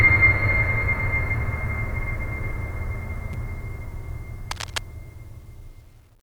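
Damaged data in a compressed stream at 3.31 to 3.35 s cuts into the music with a brief glitch lasting about 36 ms. Corrupted bytes in the encoded stream make the decoder misread the frames there, lose sync and hunt for the next valid frame header before playback recovers.

Cable scratch noise from 4.46 to 4.80 s lays a dense, uneven rustling over the music for about a third of a second, roughly 10 dB below it. This is likely a worn cable, connector or control being moved, its contact resistance fluctuating rapidly.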